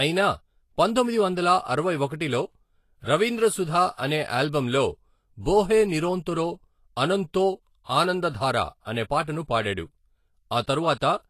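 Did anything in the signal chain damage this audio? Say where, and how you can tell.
Yes, at the codec stage. The whole clip is hissy and grainy, with nothing above 14.2 kHz. The likely cause is Vorbis compression at a low bitrate, near 33 kbps.

Pre-echo comes from the same codec. A brief hiss fills 9.22 to 9.27 s, 52 ms, before an attack. Block-wide quantisation noise spills ahead of it.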